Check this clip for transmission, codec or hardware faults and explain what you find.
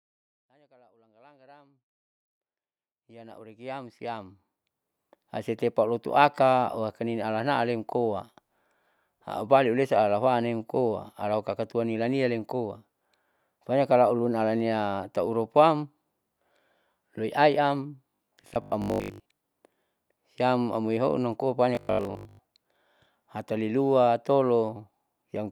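One transmission fault appears twice: robotic sound from repeated short buffers, at 18.10 to 19.40 s and 21.75 to 22.41 s. New audio likely arrived too seldom. Repeated 20 ms chunks filled about half the first stretch and most of the second. This forces a rigid, metallic 50 Hz buzz onto the speech. The smooth fade-in over the first 5.2 s is a normal edit, not a fault.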